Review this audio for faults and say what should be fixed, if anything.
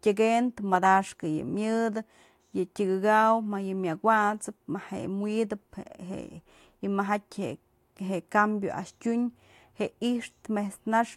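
Nothing stood out on listening to the speech here, so there is nothing that needs fixing.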